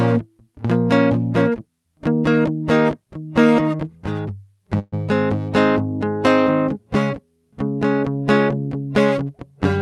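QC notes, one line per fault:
4.79–4.94 s, call audio freeze: the music stalls for about 150 ms. For roughly 130 ms the last sound is stretched into a fading buzz or hiss, followed by about 10 ms of silence, and then the music resumes exactly where it left off, with nothing skipped. From that point on, everything plays about 130 ms late. The likely cause is packets arriving late, so the jitter buffer ran dry and the receiver filled the gap by extending what it last had. Across the clip, the top end stops around 12 kHz, consistent with an Opus call path.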